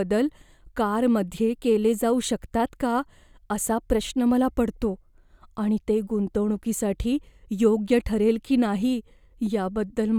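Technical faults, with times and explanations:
No technical faults can be heard in this recording.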